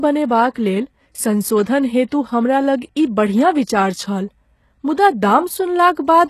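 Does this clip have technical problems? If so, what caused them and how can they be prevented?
Yes. The speech throughout carries plainly audible HE-AAC compression damage, likely from encoding at a very low bitrate, with the damage pointing to something around 16 kbps. The codec transmits only the lower spectrum and synthesises the treble by copying lower bands upward under a coarse envelope, so the high end sounds artificial. Harmonics fail to align across the crossover, sibilants turn gritty or lispy, and nothing remains above 12.3 kHz. To prevent it, encode at a higher bitrate with plain AAC-LC, or keep an uncompressed master.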